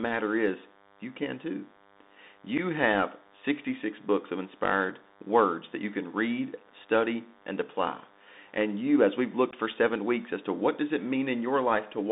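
Speech running about 12 seconds, heard down a narrowband Bluetooth headset link with a DECT buzz laid underneath the whole way through. The buzz is that steady, thin 100 Hz drone with a stack of harmonics sitting around 30 dB under the speech. It's the signature of a DECT cordless phone or base nearby firing a short radio burst every 10 ms, which the audio circuitry rectifies into a repeating tone. The band is squeezed to roughly 200 Hz up to 3.7 kHz, and the codec damage is plainly audible, which fits the Bluetooth CVSD headset codec on a 64 kbps link. CVSD sends one bit per sample saying only up or down and adapts its step size, so nothing above 4 kHz gets through. Loud high-frequency content outruns the step and distorts, s sounds come out scratchy, and there's a granular hiss riding under the speech. On top of that there are two dropouts of unconcealed Bluetooth headset packet loss. 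One at 2.58 s is 7.5 ms long, consistent with one lost packet. The other, at 9.51 s, is 15 ms, about two packets, falling right after "you as we've" and just before "for seven weeks as". In both, the missing voice packets between headset and phone weren't patched over, so silence or an idle pattern fills the gap and you get a short hole with abrupt edges.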